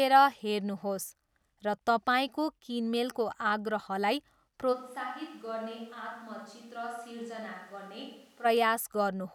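From 4.75 s to 8.44 s the speech turns suddenly roomy and hollow, with thinner bass and a drop of about 10 dB. Background noise rises to only about 25 dB below the speech. At 8.44 s the close, full sound returns just as abruptly. This is likely a switch to a distant microphone: the close microphone's feed dropped out and a pickup further from the talker took over, capturing more room and noise.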